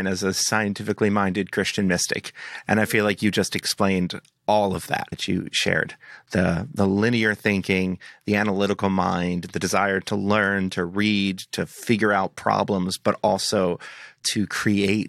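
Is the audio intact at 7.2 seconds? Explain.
Yes, the speech at 7.2 seconds is intact, with no fault present at that moment.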